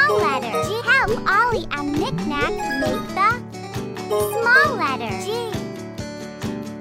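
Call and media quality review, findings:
Nothing stood out on listening to the clip.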